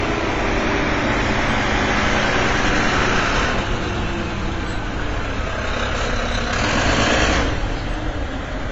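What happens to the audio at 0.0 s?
From 0.0 s the sound is dull and smeared, with nothing above 8 kHz and plainly audible codec damage that lasts the whole clip. The likely cause is AAC compression: at a rate that fits about 24 kbps, the encoder drops the top band and coarsely quantises the rest.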